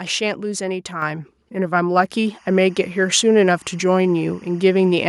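At 1.02 s the microphone volume steps up by about 6 dB in a single jump, lifting voice and background together, unlike a compressor's gradual gain ride. From 2.26 s to the end, timecode bleed adds a faint chirping warble near 1 and 2 kHz, roughly 35 dB below the speech. Its rhythm fits 23.976 fps timecode and distinguishes it from steady mains hum.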